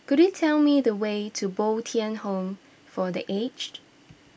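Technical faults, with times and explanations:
No technical faults can be heard anywhere in this speech recording. There is nothing here to time or explain.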